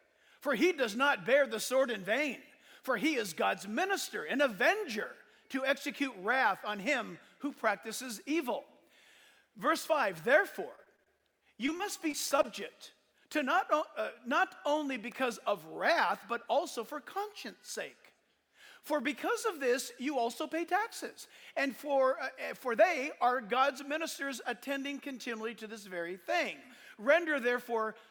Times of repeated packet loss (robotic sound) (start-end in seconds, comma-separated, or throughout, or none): 10.75-12.46